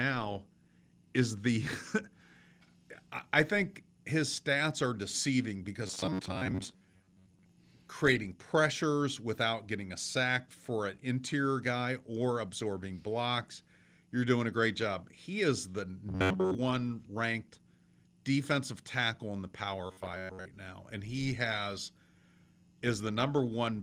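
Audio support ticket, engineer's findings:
Rigid metallic buzz at 93.8 Hz: 5.87–7.49 s (after "stats are deceiving because"), 16.09–16.55 s (after "is the"), 19.87–20.45 s (before "now and he has"). Likely robotic sound from repeated short buffers: late input, last ~10.7 ms looped. About half of the first span is repeated audio, most of the later two.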